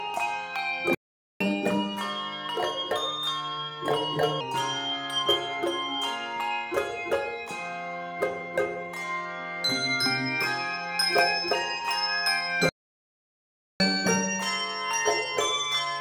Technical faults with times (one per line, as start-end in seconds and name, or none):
0.95-1.41 playback stall
1.41-4.41 catch-up at higher speed
12.69-13.80 playback stall
13.80-16.01 catch-up at higher speed